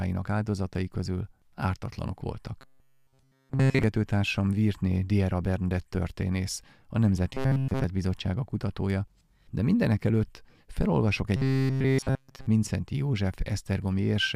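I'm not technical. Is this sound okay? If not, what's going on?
No. Three stretches of robotic sound from repeated short buffers: 2.61 to 3.84 s after "áldozatai közül ártatlanok", 7.33 to 7.84 s after "történész a", and 11.36 to 12.47 s. The speech turns into a metallic 133 Hz buzz. The likely cause is tiny slices of sound, about 7.5 ms each, being replayed over and over while the real audio is skipped.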